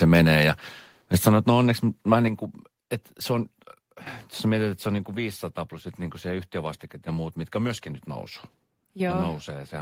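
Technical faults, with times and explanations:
1.14–1.28 s: microphone overload. Peaks exceed the converter's limit by about 2 dB, and roughly 3 percent of samples have flattened tops. The loudest syllables before "että no onneksi mä" get a harsh, crackling edge. The likely cause is excessive input volume.
1.28 s and 2.28 s: microphone volume stepped down. Voice and background drop together, by about 4 dB, then about 5 dB. The first drop follows the distorted peak. The second falls between "että no onneksi mä" and "kuin että se on". Call software likely lowered the input level.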